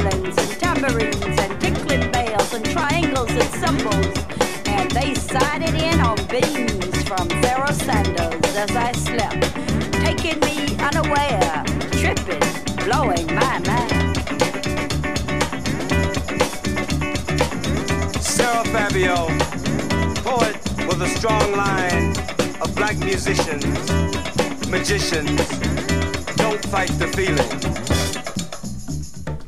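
At 4.68, 10.67, 16.66, 22.66 and 28.65 s the audio skips briefly, losing a few milliseconds with the two sides butted together. The exact 6-second spacing points to audio missing between chunks, likely from the recorder dropping samples at each chunk boundary.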